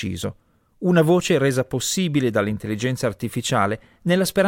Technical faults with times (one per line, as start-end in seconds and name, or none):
none